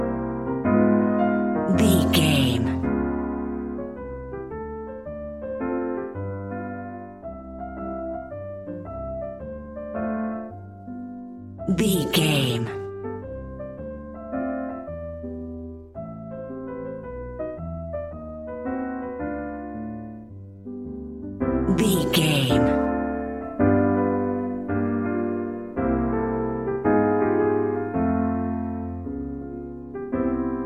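Nothing here calls for a timestamp, since no technical fault turns up anywhere in the clip.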